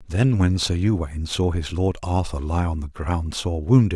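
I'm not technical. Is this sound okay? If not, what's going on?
Yes, this short speech recording is in sound technical shape, with nothing going wrong in how the signal was captured or carried.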